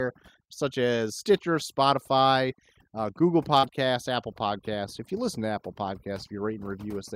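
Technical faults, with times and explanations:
Throughout, overdone noise removal: an over-strong noise reducer cuts bands near its noise estimate, leaving a lowered background with twinkling specks.
3.59 to 3.72 s, short concealed packet loss: about 40 ms of audio arrived too late, so the decoder extended the preceding sound for 36 ms, heard as a brief smear or wobble.
3.63 to 3.69 s, lost packet rebuilt from error correction: the decoder played low-bitrate backup copies for 40 ms, which fits two lost packets, so the sound turns briefly rougher and noisier.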